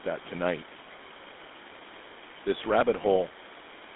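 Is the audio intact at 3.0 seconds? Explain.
No. From 3.02 to 3.05 s a lost GSM frame is concealed by repeating the last good frame's settings, giving a brief rough, metallic ring rather than a silent gap. Throughout, the GSM full-rate codec also adds buzzy, gravelly roughness within a 250 Hz to 3.6 kHz band, a steady coloration unlike that momentary ring.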